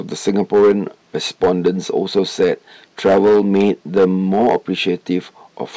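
Speech, and it's hard clipping all the way through: driven roughly 9 dB past full scale, so about 4% of samples get squared off.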